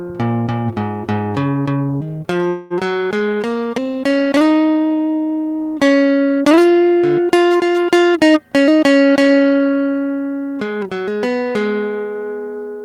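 At 2.49 s the music freezes until 2.73 s, a call audio freeze. The last sound is carried on as a fading buzz or hiss for about 216 ms, likely because packets were held up and the jitter buffer ran dry. It then resumes right where it stopped, nothing lost.

Shortly after, from 3.34 to 3.39 s, there's a short stall from a late packet. One packet missed its slot, so the receiver stretched the previous sound by about 19 ms before carrying on, which you hear as a brief held tone with a slight buzz or dip.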